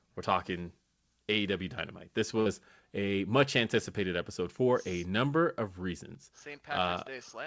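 At 2.40 s, just before "a much anticipated episode", a burst of packet loss breaks the speech for about 76 ms. The receiver stretches the last sound for 56 ms and fades it. About 60 ms of speech never returns. Nothing sounds above 8 kHz, consistent with a G.722 call path.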